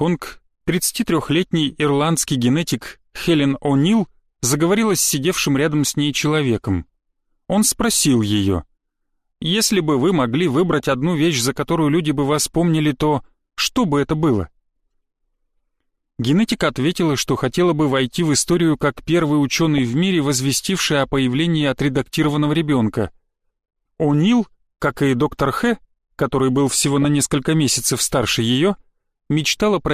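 At 10.73 to 10.92 s, 19.78 to 19.83 s, 22.24 to 22.53 s and 26.93 to 27.05 s, DAB burbling breaks out: short blips of noise on top of the sound. Weak reception lets a few tenths of a percent of bits slip past error correction into the MP2 stream, so corrupted samples put short noise blips into single sub-bands, and any corrupted scale factors that get through make sub-bands jump in level for up to a frame. The longest burst points to around nineteen damaged frames.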